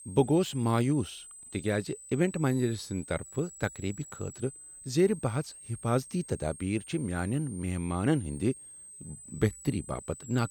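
A switching power supply whistles throughout this speech clip, leaving a high tone wandering between 7.6 and 9.0 kHz, roughly 20 dB below the speech.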